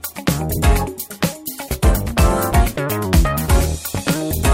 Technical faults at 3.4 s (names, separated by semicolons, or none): none